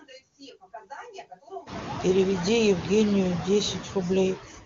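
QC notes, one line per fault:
throughout: noise suppressor artifacts. Background noise ducks between phrases and swells back under the speech. The suppressor pulls down bands it judges to be steady noise by about 19 dB, frame by frame, so the floor keeps pumping, most noticeably once the room noise rises around 1.5 s.
4.35 to 4.65 s: speech cut by the noise suppressor. The closing sounds fade and seem swallowed, dropping by about 17 dB across roughly a fifth of a second. The suppressor mistook this quiet tail of speech for background and turned it down along with the noise.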